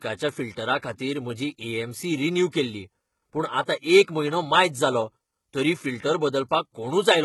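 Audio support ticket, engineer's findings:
HE-AAC compression, throughout. Treble above the core band sounds synthesized: s sounds gritty and lispy, upper harmonics not aligned. Likely spectral band replication copying low bands upward under a coarse envelope; heavy damage points to a very low bitrate, around 16 kbps.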